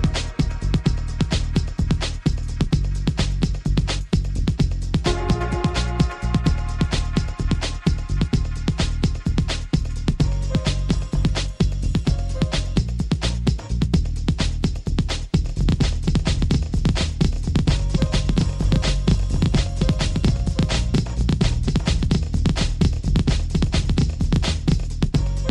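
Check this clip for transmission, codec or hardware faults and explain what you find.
One fault: a doubled audio track from 15.45 s to 24.87 s. A second full-band copy trails the original by about 0.7 s, roughly 5 dB quieter, with no decay or room colour, and starts and stops abruptly, likely from a slower second capture path.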